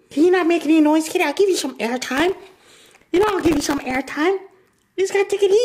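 From 2.17 s to 3.96 s there is processor overload crackle: the processor falls behind and keeps missing deadlines for its short audio buffers, over and over across that stretch. Each miss repeats a scrap of old audio with hard edges instead of fresh sound, and the rapid, tiny splices, which fit buffers of around a millisecond and a half missed well over a hundred times, form a gritty crackle over the sound that stops once the load clears.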